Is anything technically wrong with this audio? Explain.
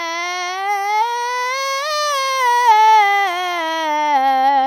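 No, this music has no audible technical problems.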